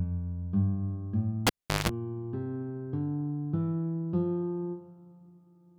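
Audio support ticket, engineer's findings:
Pop at 1.47 s, dropout about 377 ms, including roughly 172 ms of 50 Hz mains buzz, second pop near 1.89 s. Cable pulled and plugged in: live jack disconnected, tip-only contact picking up hum before full reconnection.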